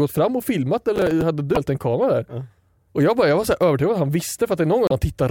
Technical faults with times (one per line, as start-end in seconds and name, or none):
0.96-1.22 processor overload crackle
1.53-1.57 damaged data in a compressed stream
4.87-4.92 damaged data in a compressed stream